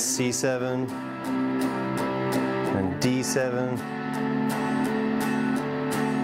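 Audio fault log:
No faults are audible anywhere in this clip.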